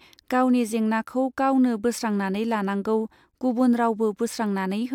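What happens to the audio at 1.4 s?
Nothing goes wrong at 1.4 s; the speech there plays through cleanly, with no dropout, click, distortion or other fault.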